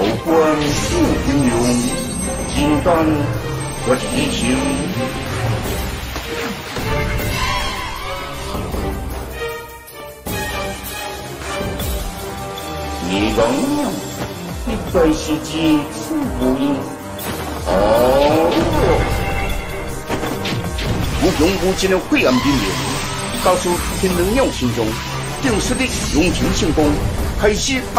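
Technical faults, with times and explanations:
10.00–10.18 s and 18.79–18.83 s, DAB burbling: sparse bit errors corrupt MP2 sub-bands, giving short blips of noise in single sub-bands; the spectrogram shows isolated band-limited blocks flaring frame by frame.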